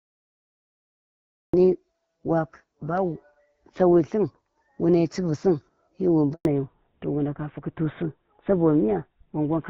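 Cut-off start, 0 to 1.54 s: the stream began late, so the clip opens on digital silence and the speech enters abruptly at 1.54 s in the middle of a sound, with no natural attack or fade-in to ease it in.

Handover gap, 6.33 to 6.45 s: right after "sun hi wi", the call switched networks and no speech frames arrived during the move. The voice dies away quickly and stays silent for about 120 ms until the new link takes over, and the speech from that moment is lost.

Fallback to narrowband, from 6.45 s to the end: the call dropped from HD Voice to an older narrowband codec. Before this, the wideband speech is clear and light in codec damage, which fits AMR-WB at 12.65 kbit/s. Afterwards nothing remains above 4 kHz, and the voice turns duller and rougher, consistent with GSM full rate at 13 kbit/s.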